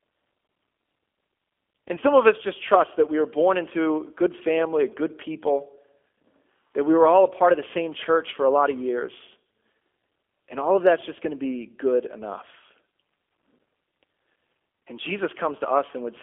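Throughout, the speech carries G.729 codec damage at 8 kbit/s. The band runs from 300 Hz to 3.4 kHz. Rebuilding speech from a filter and a few pulses makes it plainly rough and synthetic.

From 1.95 to 2.04 s comes VoIP packet loss concealed by the speech codec. About 50 ms is missing, scattered over 80 ms, with no gap longer than 20 ms. Further losses follow: 10 ms at 4.89 s, and 20 ms from 9.99 to 10.01 s. Each time the decoder stretches its last pitch and filter into a fading buzzy tone or coloured noise. The speech then sounds weak or distorted for a short time after each loss.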